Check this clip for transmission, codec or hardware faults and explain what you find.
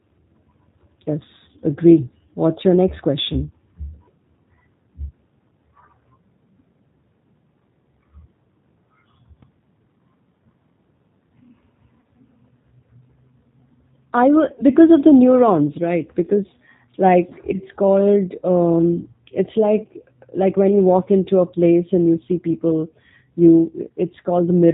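Three faults are present: codec coding across the whole clip, one DC offset episode, and two short packet-loss gaps.

The G.729 codec affects the entire speech clip. The roughness and band limit fit an 8 kbit/s G.729 stream. Speech is resynthesised from a vocal tract filter, a pitch predictor and a few pulses per frame, so nothing above 4 kHz remains and the voice sounds plainly rough and synthetic.

A DC step occurs at 9.43 s, and the offset holds until 16.35 s before stepping back. The waveform's zero line shifts abruptly, as when an offset input is switched in. Each transition is heard as a low thump while the speech continues unchanged.

VoIP packet loss concealed by the speech codec appears twice, at 12.00 to 12.05 s (40 ms) and at 14.55 to 14.64 s (30 ms). The decoder extrapolates from its last pitch and filter with falling gain, so each gap becomes a short, fading buzzy tone or coloured noise rather than silence.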